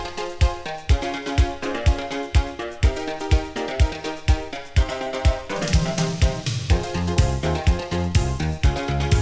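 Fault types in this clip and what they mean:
Short concealed packet loss: at 5.04 s and 7.14 s, 20 ms of audio failed to reach the decoder in time. Each time, the receiver extended the preceding sound across the gap and blended back, leaving a brief smear or wobble.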